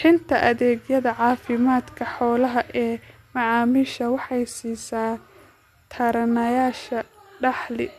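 Nothing stood out on listening to this recording of speech.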